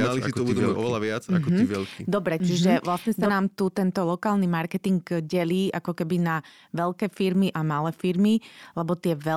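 Speech, and right from the top there's a doubled audio track: a second, full-band copy of the speech runs about a second behind the first and at roughly the same level, so everything overlaps into a confusing echo with no decay or room colour. It's already going when the clip opens and cuts off abruptly at 3.3 s, after "si to uvedomujú oveľa" and before "tu tento lokálny marketing". Likely a slower second capture path or an out-of-step edit.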